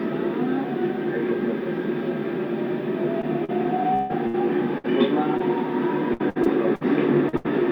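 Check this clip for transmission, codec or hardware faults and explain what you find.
Repeated packet loss (robotic sound) occurs twice, from 3.21 to 5.41 s and from 6.13 to 7.46 s. In each stretch, six holes in the stream are patched by extending the preceding sound. The holes are as long as 151 ms in the first stretch and 78 ms in the second, and concealment covers about 16% and 23% of each. The result is choppy audio with pieces missing.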